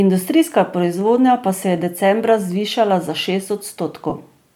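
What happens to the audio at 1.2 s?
At 1.2 s the audio sits inside a run of clock drift buffer slips from 0.84 to 3.66 s: regular clicks every 0.94 s, most likely from a clock mismatch of roughly 200 ppm dropping or repeating a few samples each time. On a spectrogram each slip shows as a thin vertical broadband line, and on the waveform as a small step.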